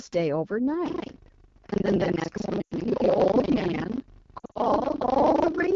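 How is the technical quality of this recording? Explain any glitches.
Technical quality is poor, with three separate problems. Throughout, the AMR wideband (HD Voice) codec is audible as rough, raspy speech, which fits a low mode around 8.85 kbit/s. A spectrogram shows noise-filled energy above 6.4 kHz.

From 0.84 s to the end there is buffer tearing. The writer and reader have slipped, so about half of each buffer repeats audio from roughly 150 ms earlier. This produces a steady 25 Hz buzz, with hard vertical seams in the waveform.

Lost AMR speech frames occur at 2.61–2.74 s, a 100 ms run, and at 4.39–4.58 s, where 120 ms of losses are scattered over 160 ms. The decoder reuses the last sound's settings and fades it to near silence within two frames, leaving smeared, dimming spectrogram bands.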